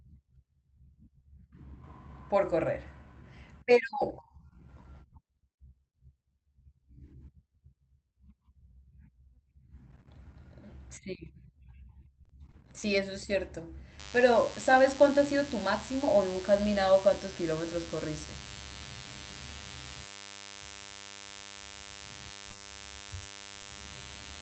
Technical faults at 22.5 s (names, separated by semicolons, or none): DECT cordless phone buzz; short concealed packet loss; lost packet rebuilt from error correction